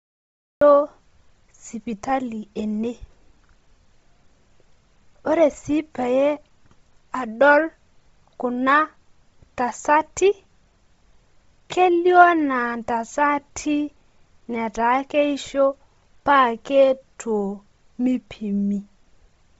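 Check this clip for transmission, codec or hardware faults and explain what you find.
Two faults stand out in this speech clip: a late start and heavy codec damage throughout.

The clip opens with a cut-off start. The first 0.61 s is digital silence, and at 0.61 s the speech begins mid-sound with no natural attack. On the waveform, a flat line jumps straight into the speech; on a spectrogram, a hard vertical edge appears where capture began late.

Across the whole clip there is heavy compression damage, likely from Bluetooth LC3 compression. Nothing survives above about 7.7 kHz, and the upper band is refilled with synthetic noise, giving the speech a breathy, grainy edge. On a spectrogram, this shows as a sharp ceiling at 7.7 kHz with speckled, blocky texture below it. The graininess fits a low bitrate of around 24 kbps with short 7.5 ms frames.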